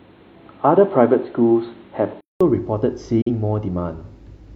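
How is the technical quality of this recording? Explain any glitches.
The recording has two glitches. From 0.00 to 2.41 s, speech is dull and boxy with nothing above 4.2 kHz, ending in a 0.2 s silence. Likely input switched to a poorer device: a distinct level and noise floor mark a different microphone, not equalisation. At 3.21 to 3.29 s, a digital broadcast dropout: an 8 ms fade into a 43 ms mute, fitting one frame failing its checksum. It is clean silence, not crackle.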